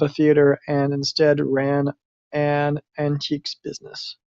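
Across the whole clip, a resampler restarted on every block leaves faint ticks every 100 ms, a steady 10 per second, heard only during speech. Each block, fitting a 44.1 kHz to 48 kHz conversion, lacked true neighbours at its edges. A spectrogram shows evenly spaced thin vertical lines, and the waveform shows small steps.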